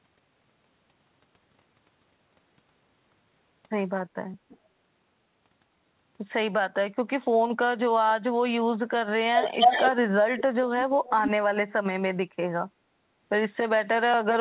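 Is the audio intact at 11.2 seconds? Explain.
No, not quite. From 11.04 to 11.31 s there's an echo leak: a delayed copy of the speech trailing the original by about 297 ms, and fairly strong, only around 5 dB below the speech itself. That's likely a far-end speakerphone whose echo canceller let some of its own loudspeaker output slip back into the microphone. It comes through as a brief doubling, band-limited like everything else on this telephone-style line, which tops out around 4 kHz.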